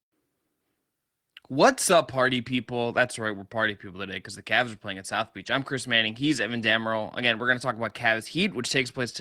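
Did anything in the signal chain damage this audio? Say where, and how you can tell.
No, nothing in the chain audibly damaged this speech.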